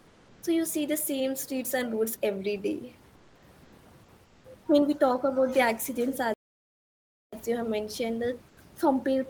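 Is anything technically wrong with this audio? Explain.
Yes. There are two faults: comfort noise in place of the background, and one playback stall.

Comfort noise in place of the background occurs at 0.00–0.42 s, 3.15–3.42 s, 3.63–3.72 s, 4.24–4.44 s and 8.48–8.57 s. In these pauses the real room background, about 30–33 dB below the loud parts, gives way to a steady, featureless hiss, usually about 1–4 dB quieter. This is likely Opus discontinuous transmission: the sender goes quiet when no speech is detected, and the receiver synthesises noise shaped like the background. Unlike a noise gate, which leaves true silence, these pauses stay filled with flat, smooth noise.

A playback stall runs from 6.34 to 7.33 s. The sound halts in mid-flow for about a second, likely because the player ran out of data or its thread was blocked. It then resumes. That sets it apart from the comfort-noise gaps: the output goes dead rather than carrying a synthetic background, and it cuts into the sound itself rather than a pause.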